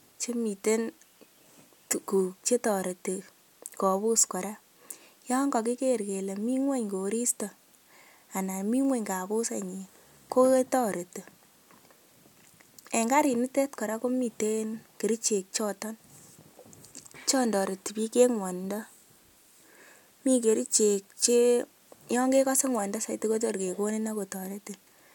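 Nothing stood out as a technical problem on listening to the speech.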